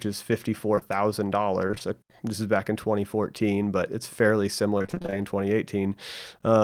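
At 0.75 and 0.79 s, two back-to-back short concealed packet losses: 20 ms holes bridged by extrapolating the preceding speech, heard as a brief smear. Repeated packet loss (robotic sound) at 1.67–1.82 s before "uh this is back" and at 4.78–5.14 s after "but it's fairly": about half of each span is concealment, producing choppy speech.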